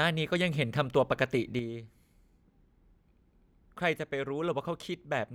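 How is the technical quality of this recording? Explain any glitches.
The recording has one clear glitch. From 1.59 s to the end, the speech steps down abruptly by about 6 dB and stays there, likely because one channel drops out before the mono sum. A fader move would ramp rather than step.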